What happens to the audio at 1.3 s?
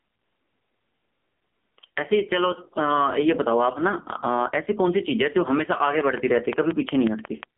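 At 1.3 s, as throughout the clip, the input gain is set far too high and a fast limiter or compressor, the likely cause of this gain pumping, keeps pulling it down on loud speech. The gain swings by around 20 dB between louder syllables and quieter moments, flattening the dynamics.

The same moment also goes through the AMR narrowband mobile codec, which models the voice with a handful of pulses per short frame. The damage is heavy, which fits a low mode of about 5.9 kbps. Nothing above 3.5 kHz survives, so speech sounds muffled, buzzy and synthetic.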